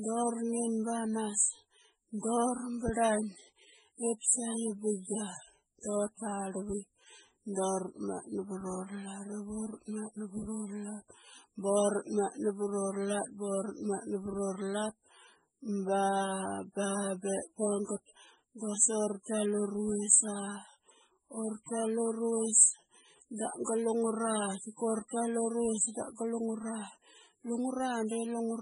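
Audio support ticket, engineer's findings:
Heavy watery, swirly smearing across the whole speech clip. Metallic chirps on s sounds. Nothing above 10.5 kHz. Probable component: encoder, likely MP3 compression starved of bits, which fits a bitrate around 16 kbps. Weak frequency lines drop in and out between frames. Treble cut at a fixed point.

Short hiss before a sharp attack, 25.08 to 25.11 s, spread over 24 ms. Attack sounds soft and smeared. Probable component: same transform codec. Pre-echo. Quantisation noise sized for the loud attack fills the quiet moment ahead of it within one block.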